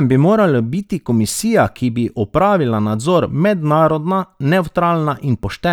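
The speech recording has no technical faults anywhere in its signal.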